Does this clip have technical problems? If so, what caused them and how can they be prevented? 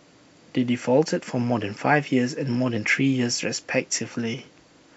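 No, nothing stood out as a technical problem on listening to this speech recording, so there is no cause to trace and nothing to prevent.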